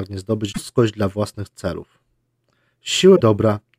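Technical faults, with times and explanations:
0.49–0.58 s and 3.12–3.21 s, damaged data in a compressed stream: corrupted bytes make the decoder misread those frames and hunt for the next valid header, so each brief stretch comes out as a chirp, squawk, click or short hole.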